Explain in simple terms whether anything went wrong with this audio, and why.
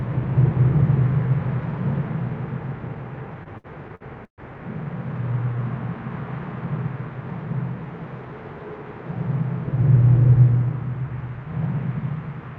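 Between 3.43 and 4.41 seconds the sound catches and drags five times, as if it keeps getting stuck for a moment, the longest catch lasting about 131 ms. These are repeated stalls (stutter). The audio was arriving over a network, and the pieces kept turning up late, so the playback reserve ran dry. Each time, the receiver stretched the last bit of sound to cover the wait, about 284 ms in all, nearly a third of that stretch. Nothing is actually lost, but the flow is broken up.

Shortly after, from 5.32 to 5.60 seconds, the sound briefly slows to about 88% of its normal speed while keeping the same pitch, so that moment feels drawn out. This is a jitter buffer slow-down. The receiver's small store of waiting audio was running low, or it had decided to hold a larger safety margin, so it repeated tiny slices of the sound over and over to buy time. That added about 41 ms and let the store refill.

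Both happened on a call-style connection whose codec cuts off everything above 8 kHz.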